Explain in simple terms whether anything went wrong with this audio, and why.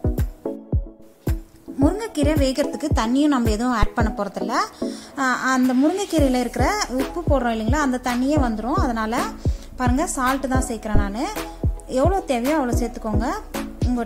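Something did go wrong: a phantom power thump at 3.83 to 3.89 s. Power was switched on or off on a live microphone input, sending a sudden jolt through it. Unlike a sharp click, it is a deep, loud bump that dies away almost immediately.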